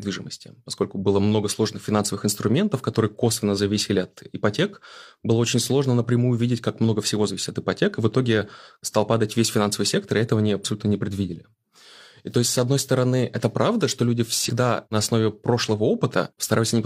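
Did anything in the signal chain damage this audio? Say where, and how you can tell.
Yes, there are compressed frames skipped at the codec or decoding stage, at 14.45 to 14.50 s. The speech jumps ahead by about one 46.4 ms frame, roughly 50 ms lost.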